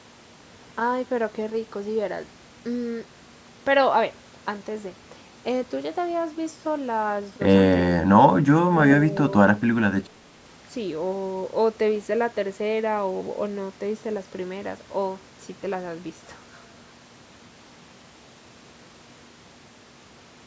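No technical faults can be heard anywhere in this speech. The call microphone processing behaves as it should, trimming the lowest bass and leaving nothing above 8 kHz.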